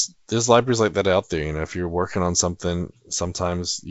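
The speech comes through G.722 wideband telephone coding at 64 kbit/s with no technical faults, its bandwidth reaching to about 7.7 kHz and any coding trace no more than faint.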